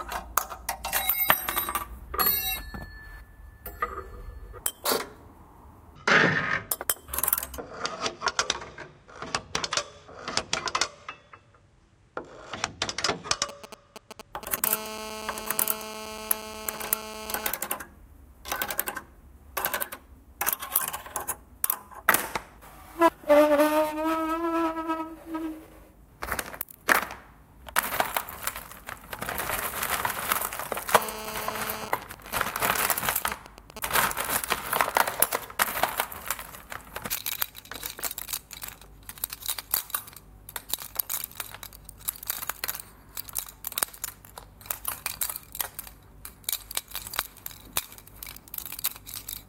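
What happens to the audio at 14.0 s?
GSM signalling bursts, 13.49 to 14.60 s: a nearby 2G phone's rectified bursts give galloping dit-dit-dit buzzes at 217 Hz, not steady hum.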